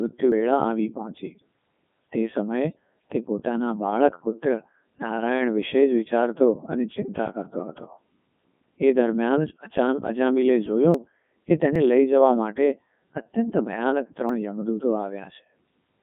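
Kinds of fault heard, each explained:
Codec 2 vocoder: The speech has been rebuilt from pitch, voicing, energy and a spectral envelope at 3.2 kbit/s rather than carried as a waveform, so it comes out robotic and buzzy, with heavy damage. The band runs from about 150 Hz to 3.5 kHz. Plain band-limiting would leave a natural, if muffled, voice. Here the voice itself is synthetic, built from sine waves, which is what marks a vocoder.
dropped buffer (overrun): At 0.32, 10.94, 11.76 and 14.29 s the speech jumps forward. Around 70 ms goes missing at 0.32 and 14.29 s, and around 20 ms at 10.94 and 11.76 s. The likely cause is that the samples were not collected before the hardware overwrote them. This differs from a dropout because no silent gap is left. The two sides are joined directly, so the sound skips ahead.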